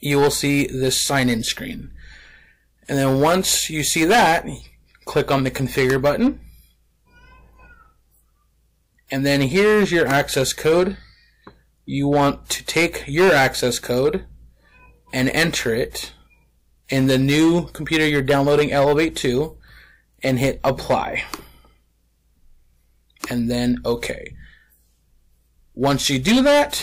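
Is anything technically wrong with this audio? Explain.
Yes. Hard clipping runs through the whole recording. The signal was driven roughly 17 dB beyond what the converter or processing stage could pass, so every peak above that ceiling is sliced flat. Around 4 percent of the samples sit on the limit. Those squared-off tops generate strong high-order harmonics, heard as a harsh, gritty fuzz riding on each loud moment rather than as occasional crackles.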